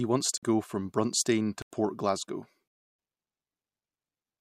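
Blocks of digital silence at 0.38 s (51 ms, before "go from"), 1.62 s (85 ms, fitting a 4096-sample block) and 2.68 s (308 ms) show as flat near-silent lines and blank spectrogram columns, heard as hard-edged holes.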